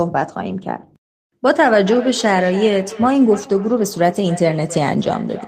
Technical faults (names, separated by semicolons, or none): feedback echo between two devices